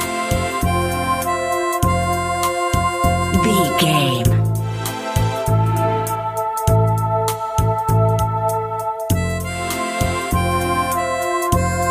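No dropouts, clicks, distortion or level problems turn up anywhere in the recording.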